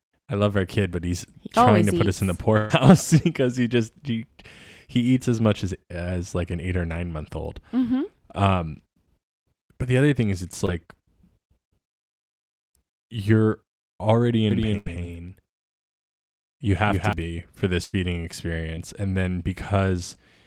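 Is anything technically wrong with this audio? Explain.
Yes. Several network and mixing faults are audible in this speech.

A burst of packet loss occurs at 2.57–2.72 s, 14.78–14.88 s, and 17.84–17.95 s, the last just after "be for this". Each time, roughly 80–120 ms of audio goes missing. The receiver extends the last sound as a fading buzz or hiss, then jumps ahead. On a spectrogram this shows as a smeared, decaying block ending in a hard discontinuity.

A short concealed packet loss falls at 10.66–10.70 s, after "other thing is it's", and at 18.75–18.79 s, before "and then". About 20 ms was synthesized from the preceding sound, giving a brief smear or wobble. In the waveform it looks like a slightly wobbly patch.

A doubled audio track runs from 14.51 to 17.13 s, likely from a second, slower capture path. A full-band copy trails by around a fifth of a second, about 5 dB quieter, and starts and stops abruptly. 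On a spectrogram the copy appears as shifted repeats of every onset.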